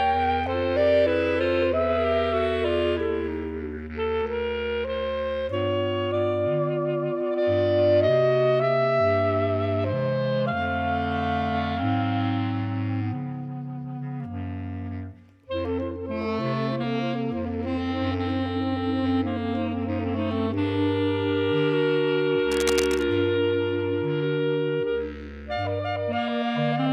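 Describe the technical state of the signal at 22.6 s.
At 22.6 s the signal carries cable scratch noise, running from about 22.51 to 23.04 s. It sounds like a half-second patch of dense, irregular scratching laid over the sound, roughly 10 dB below it. The likely cause is a worn cable, connector or control being moved, so its contact resistance jumps about rapidly. Unlike isolated clicks or a clean dropout, the disturbance is a dense rustling cluster of uneven bursts, and the underlying sound keeps going beneath it.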